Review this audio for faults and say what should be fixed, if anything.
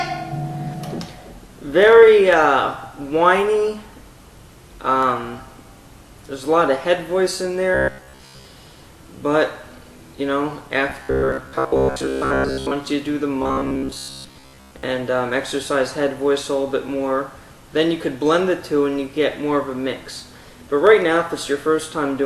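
Robotic sound from repeated short buffers at 7.75–8.45 s, 10.90–12.73 s and 13.42–14.83 s: a rigid 66.7 Hz buzz, likely from one roughly 15 ms block repeating while most real audio is skipped. Unlike plain dropouts, it gives a steady pitched drone rather than gaps or clicks. Deeper buffering or faster audio delivery would prevent it.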